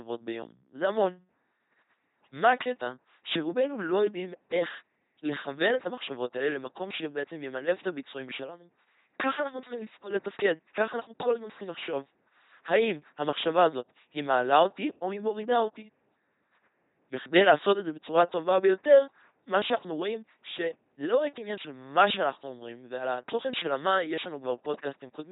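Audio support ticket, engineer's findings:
LPC-10 vocoder artefacts, whole clip. Buzzy, mechanical robot timbre on the speech. Nothing above 3.8 kHz. Heavy codec damage, consistent with roughly 2.4 kbit/s. Speech resynthesised through a ten-pole vocal tract filter, excited by pulse train or noise only.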